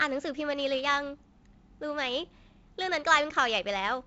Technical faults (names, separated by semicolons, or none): none